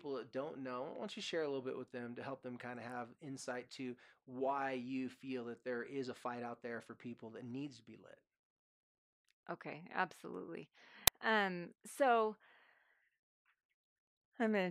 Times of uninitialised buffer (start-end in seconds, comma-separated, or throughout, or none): 11.07